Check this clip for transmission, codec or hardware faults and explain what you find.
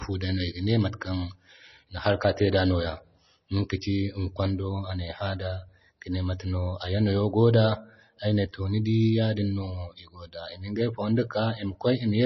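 One codec fault is present, running through the whole recording.

Throughout, the speech carries heavy damage that points to MP3 compression as the likely cause. Nothing survives above 5.9 kHz, the hard treble cut an encoder makes when bits run short, and the damage level fits a low rate around 24 kbps. Starved of bits, the encoder drops weak frequency lines that flicker between frames, giving the audio a watery, swirling quality, metallic chirps on s sounds, and smeared attacks.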